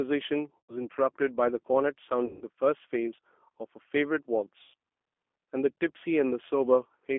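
Speech passed through the G.729 codec for the whole clip, at 8 kbit/s, and the damage is plainly audible. Everything sits inside a telephone band of roughly 250 Hz to 3.4 kHz, and the voice has the slightly rough, synthetic texture of speech rebuilt from a vocal tract filter, a pitch predictor and a few pulses per subframe. Plain band-limiting or an EQ roll-off would leave the waveform natural inside the band, so that buzzy, modelled quality is what marks this as G.729. Three dropouts are covered by VoIP packet loss concealed by the speech codec: at 0.60 to 0.74 s, with about 100 ms of audio lost; at 2.25 to 2.44 s, with about 160 ms lost; and at 4.64 to 4.74 s, with about 100 ms lost. The lost amounts fit runs of 20 ms packets. At each gap the decoder stretches the last pitch and filter into a fading buzzy tone or coloured noise and recovers weakly afterward. A plain packet dropout would leave silence or a hard click instead of this smeared, decaying sound.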